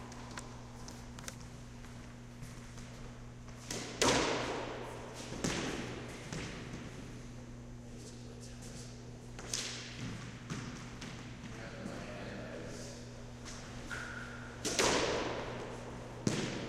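No technical faults can be heard anywhere in these everyday sounds. Nothing in the recording calls for comment at any point.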